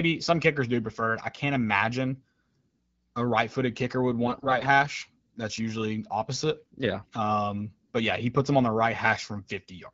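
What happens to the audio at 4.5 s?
From 4.26 to 4.65 s the sound turns hoarse, scratchy and gargly, with pitch and level roughly held. These are AMR bit errors: flipped low-protection bits decode into misplaced excitation pulses and skewed gain and spectrum values. Unlike lost frames, nothing is muted or smoothed over.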